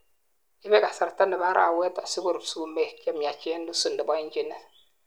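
No technical faults are audible in this speech recording.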